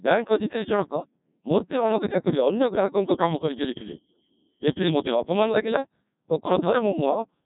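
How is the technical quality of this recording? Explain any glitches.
Poor: the whole recording has passed through the Codec 2 vocoder at a very low rate, consistent with about 1.2 kbit/s. Only pitch, voicing, energy and a coarse envelope survive, so throughout the speech is rebuilt from sine waves, sounding robotic and buzzy, with nothing above 3.8 kHz.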